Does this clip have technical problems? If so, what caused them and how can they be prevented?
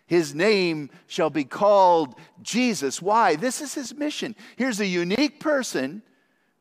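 Yes. At 5.15 to 5.18 s the speech drops out for about 26 ms, a gap at a join of encoded pieces, then resumes exactly where it stopped. The audio was encoded in separate segments and spliced without trimming, so the encoder's start-up delay and the padding on the final frame of the earlier piece remain as silence. The edges of the dropout are smeared by the codec. Prevent it by encoding the audio as one continuous stream or by trimming encoder delay and padding at every splice (gapless handling).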